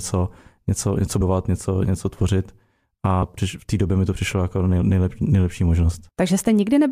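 At 1.20 to 1.22 s the audio jumps forward by roughly 150 ms. These are compressed frames skipped, around fifteen of them, either missing or rejected as damaged. Unlike a dropout, there's no silent gap; the audio simply jumps ahead.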